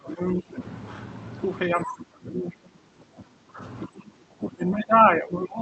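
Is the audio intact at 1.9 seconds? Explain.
No. Speech suppressed in double talk runs from 1.69 to 3.62 s. The level dips by about 25 dB at its deepest, and the speech thins and breaks up. Both sides were likely talking at once, so the echo canceller turned everything down.

Within that dip, the other side's voice leaks through from 1.83 to 1.96 s. It is a brief scrap, about 10 dB below the speech. Some loudspeaker echo likely escaped cancellation and reached the microphone.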